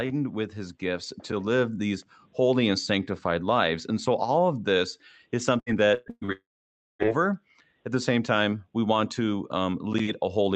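Right after "all of this is", from 5.59 to 6.31 s, the speech turns choppy and robotic, with short stretches of continued sound replacing missing pieces. This is repeated packet loss: four gaps, the longest 116 ms, each patched by extending the previous sound, covering nearly half that span.

From 6.32 to 7.10 s, a fading buzz gives way to roughly half a second of silence before the speech resumes with part of it gone. The likely cause is a long network dropout, where no audio arrived and the receiver's concealment ran out.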